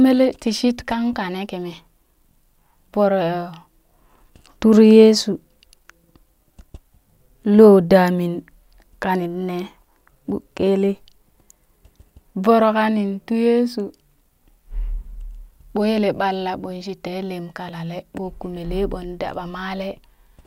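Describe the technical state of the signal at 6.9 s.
At 6.9 s the speech signal is intact, with no dropout, distortion or other fault to be heard at that moment.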